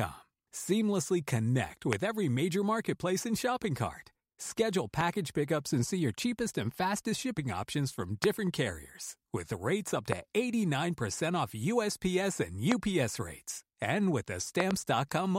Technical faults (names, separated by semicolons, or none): loud pop